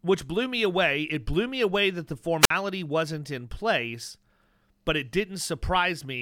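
At 2.41 to 2.50 s, between "me away that the" and "wasn't in place", a wireless microphone squelch dropout occurs: fading RF brings hiss, then the receiver mutes about 52 ms.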